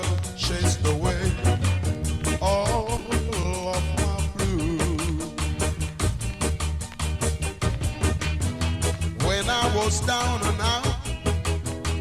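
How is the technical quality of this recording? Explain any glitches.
The recording has two network-related glitches close together, both early in the clip.

From 2.84 to 3.45 s there is repeated packet loss with a robotic sound. Audio data kept arriving late or not at all, leaving seven short gaps, the longest about 18 ms. Each time, the receiver covered the hole by extending the sound just before it, so about 12% of that stretch is synthesized. The result is choppy and mechanical-sounding, with small pieces of the audio missing.

From 3.95 to 3.97 s there is a short concealed packet loss. About 10 ms of data never reached the decoder in time, and the receiver filled about 13 ms by continuing the preceding sound before blending back into the real signal. It is heard as a quick smear or wobble rather than a clean dropout.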